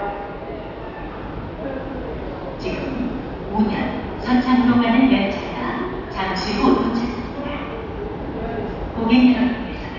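No audible technical faults anywhere in the recording of sounds.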